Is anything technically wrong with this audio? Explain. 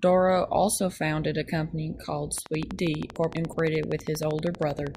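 Yes, there are two problems, and they overlap in the back half of the speech.

From 2.38 s right through to 4.96 s there's a train of clicks: a steady ticking at 12.5 per second, evenly spaced, around thirty in all. Each click has much the same shape and peaks roughly 10 dB above the speech, so the ticking sits on top of the talking and carries on through the gaps. That regular, repeating pulse most likely comes from electrical interference or a faulty connection or power supply.

Inside that stretch, from 3.16 s to 3.53 s, there's a case of chunks out of order. A block of about 186 ms arrived one chunk late and was played after the block that should have followed it. Nothing is missing, but the sequence is swapped, which leaves three hard joins. You hear a brief jumbled, garbled moment, mixed in with the ticking.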